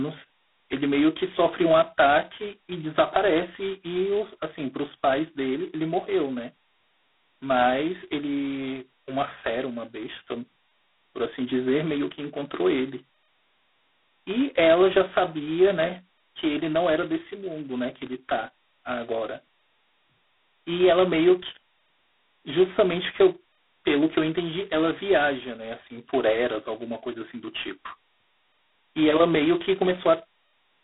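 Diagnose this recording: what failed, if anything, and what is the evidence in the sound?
G.726 ADPCM damage runs throughout the speech, a codec-stage fault. Everything above 3.9 kHz is gone, the band sits at 200 Hz to 3.5 kHz, and a harsh rasping hiss rises and falls with the speech level, which fits coarse 2-bit prediction differences at 16 kbit/s.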